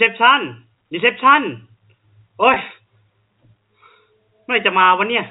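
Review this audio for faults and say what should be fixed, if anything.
At 2.54 to 2.56 s there's packet loss with pitch repetition: about 20 ms of audio went missing, which fits a single dropped packet, and the receiver bridged it by looping the last pitch period, so you hear a brief held, slightly buzzy blip before the speech carries on. The G.711 telephone coding itself keeps everything under 4 kHz. To prevent the blip, add a jitter buffer or forward error correction on that link so a lost packet can be recovered instead of concealed.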